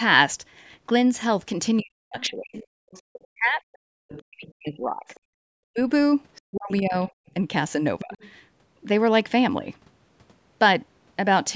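From 1.77 to 5.2 s a faint second voice runs underneath, roughly 20 dB below the main talker, and it returns from 6.35 to 8.29 s a little louder, around 15 dB down. This is the other side's voice leaking through, likely because the far end was playing on a loudspeaker and the echo canceller left part of it in the microphone signal.

Across 1.81 to 8.17 s the main speech keeps sinking and breaking up, by as much as roughly 40 dB, for about three seconds in all. That pattern is speech suppressed in double talk, likely caused by both sides talking at once, so the canceller could not tell its own talker from the echo and pulled both down.

At 5.33 s the room sound briefly drops out by about 38 dB for 50 ms, then comes back. That is background gated by the echo canceller, which clamped the microphone hard while the loudspeaker was active.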